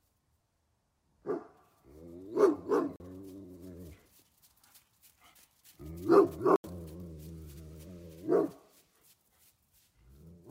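A recording of everyday sound, interrupted twice by a block of digital silence: 40 ms from 2.96 to 3.00 s, and 80 ms from 6.56 to 6.64 s. In each case the signal drops straight to zero and returns without any fade, and the longer gap is heard as a short hole rather than a single tick. Most likely the output buffer was not filled in time and zeros went out in its place.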